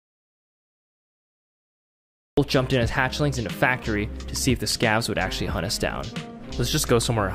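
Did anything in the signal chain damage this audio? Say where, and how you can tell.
Yes: an audio dropout to silence runs from the start to 2.37 s, pure silence without room tone, likely a lost input link while recording continued.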